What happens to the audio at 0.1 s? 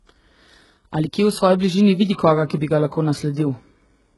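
At 0.1 s the speech already carries HE-AAC compression artefacts, which run through the whole clip. The treble is likely rebuilt by spectral band replication from copied lower bands, so s sounds turn gritty and metallic, and nothing sounds above 11.5 kHz, consistent with a very low bitrate near 12 kbps.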